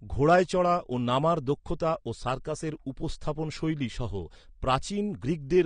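Speech runs throughout with plainly audible AAC compression, likely AAC-LC at about 32 kbps, sounding dull and smeared; a spectrogram would show a lowered top cut-off with spectral holes or noise-filled bands. From 0.26 to 0.39 s, hard clipping driven about 3 dB past the limit cuts the waveform peaks flat and adds harmonics that spread high up the spectrogram.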